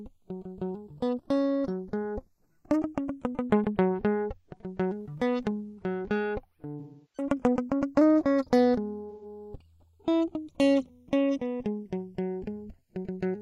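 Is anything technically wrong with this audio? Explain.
Yes. Throughout the music, the channels are drifting apart: the two sides run on separate clocks about 50 ppm apart, so the inter-channel delay creeps to roughly half a millisecond, and in mono the comb notches sweep slowly, giving a slow flanging.

AAC frame loss with concealment occurs at 6.79 to 7.28 s and again at 9.10 to 9.25 s. The decoder lost frames, about 341 ms and 128 ms of audio, which points to eight and three frames, and rebuilt them from the last good spectrum. The shorter gap is patched with a smeared, noisy or phasey texture.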